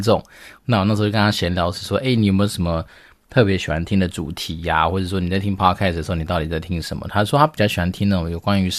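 Nothing in this speech recording stands out as a technical fault; it's a straightforward listen with no problems to point to.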